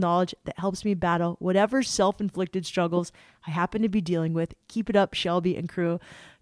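No technical faults can be heard anywhere in the speech; the signal stays continuous and steady throughout.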